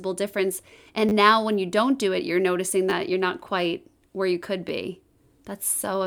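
Repeated buffer at 1.09–1.12 s, 2.90–2.92 s and 4.69 s: late audio made the device replay a 10 ms chunk three, two and one extra times, giving brief buzzy clicks.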